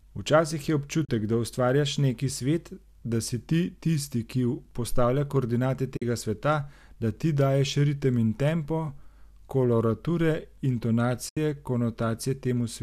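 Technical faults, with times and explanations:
1.05–1.09 s, 5.97–6.02 s, 11.29–11.37 s: AAC frame loss with muting. Runs of 4, 5 and 8 frames (40, 50 and 80 ms) were zeroed, fading out and back in. They show as blank spectrogram columns and tapered waveform dips.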